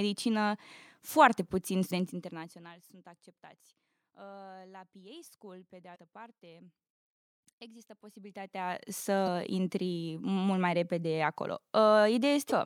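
At 1.87, 5.92, 9.24 and 12.48 s, damaged data in the compressed stream produces a brief glitch of about 40 ms each time, heard as a chirp, squawk, click or short hole. Corrupted bytes make the decoder misread frames and lose sync.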